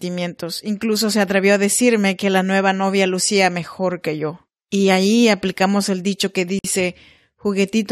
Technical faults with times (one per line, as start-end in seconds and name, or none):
6.59-6.64 gap at a join of encoded pieces